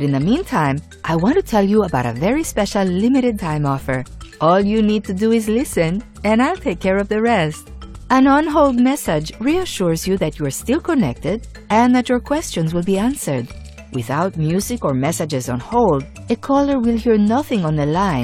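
At 3.35 to 3.40 s, compressed frames are skipped. About one frame, roughly 50 ms (which fits a 46.4 ms frame), never plays, and the audio jumps ahead by that amount.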